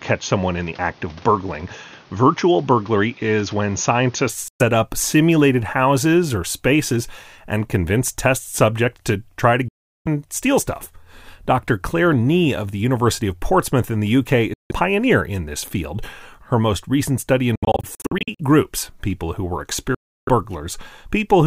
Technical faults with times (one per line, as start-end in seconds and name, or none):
0.00-4.29 input switched to a poorer device
4.48-4.62 Bluetooth dropout
9.68-10.07 Bluetooth dropout
14.54-14.71 Bluetooth dropout
17.55-18.40 Bluetooth dropout
19.95-20.29 Bluetooth dropout